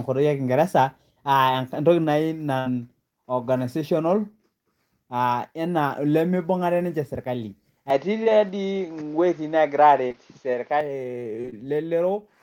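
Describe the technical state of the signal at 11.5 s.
Short concealed packet loss runs from 11.42 to 11.54 s: three back-to-back gaps of about 20 ms each, patched by extending the preceding speech, heard as a brief smear.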